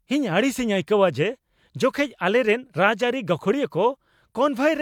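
No technical faults can be heard anywhere in the recording.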